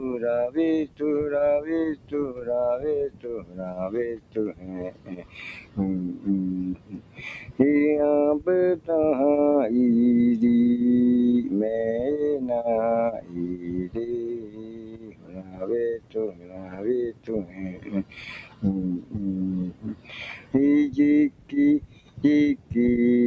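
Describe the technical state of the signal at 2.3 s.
At 2.3 s the sound sags and thins, with its sustained part pulled down by about 11 dB while sharper onsets still come through. This is sound cut by the noise suppressor, between 1.95 and 2.43 s, totalling about a fifth of a second. A speech-oriented suppressor judged that steady or fading material was noise and ducked it harder than its surroundings.

Around this moment the level also pumps and flutters, with held tones and decays sinking and recovering over a swing of around 20 dB. The cause is a noise suppressor applied to music or sounds, left active for the whole clip, which keeps misreading sustained content and ambience as background noise. The band stops at 8 kHz, as expected from the call's microphone path.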